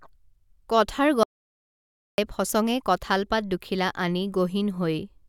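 At 1.23 s the speech cuts out abruptly. It returns at 2.18 s. This is an audio dropout to silence. The gap is silent, with no room tone at all. About 0.95 s of speech is simply missing. The input was likely lost, and the recorder kept writing silence.

At 2.50 s there is a brief glitch. This is damaged data in a compressed stream. Some bytes in the encoded file are corrupt. The decoder misreads that frame, loses sync and hunts for the next header. The result is a short disturbance.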